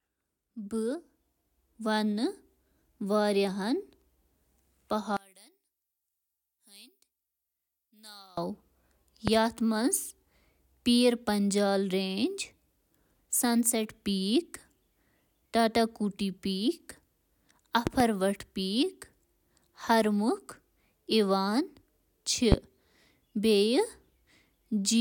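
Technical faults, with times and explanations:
5.17–8.37 s, one channel inverted: the speech drops by about 26 dB to a faint copy, because one stereo channel has likely had its polarity flipped. When the channels are summed to mono, the shared centre content cancels and only their small difference remains.
9.28–9.31 s, 17.87–18.04 s and 22.52–22.56 s, loud pop: sharp pops, with two in quick succession in the middle one, peak about 15 to 20 dB above the speech, which continues underneath. A sudden voltage step, likely from a plug, switch or static, was added to the signal.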